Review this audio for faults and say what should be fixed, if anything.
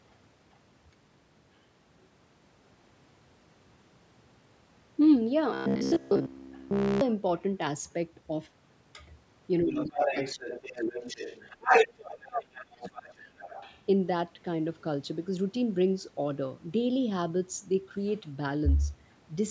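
From 5.54 to 7.01 s the voice turns into a rigid buzz near 66.8 Hz: robotic sound from repeated short buffers. The whole stretch is repeated audio. A period of about 15 ms fits a short buffer being looped while late packets likely went missing. A deeper jitter buffer with proper packet-loss concealment would prevent it.

Other side's voice leaking through appears three times. At 6.52 to 6.60 s it is faint, roughly 35 dB below the talker, and at 18.08 to 18.13 s it is fainter still. From 9.75 to 13.81 s it is nearly as loud as the talker. Loudspeaker echo was likely not fully cancelled. Better echo-canceller tuning, or a headset, would prevent it.

Speech suppressed in double talk occurs from 9.62 to 11.02 s, dipping by about 20 dB for roughly a second in all, and from 11.60 to 13.47 s, dropping by about 35 dB for roughly two seconds. Both overlap the loud leakage, so the echo canceller likely attenuated both voices. 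Double-talk detection that keeps the near talker at full level would prevent it.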